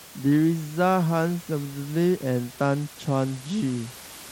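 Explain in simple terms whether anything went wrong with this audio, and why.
A Bluetooth SBC bit pool drop starts at 2.50 seconds and lasts until the clip ends. The wireless link became crowded, so the sending device cut how much detail it packs into each slice of sound to keep it flowing. From that point, the top frequencies lose their share and the rest is handled more roughly. The speech turns duller and gains a gritty, grainy edge. The faint room noise underneath is simply part of the recording.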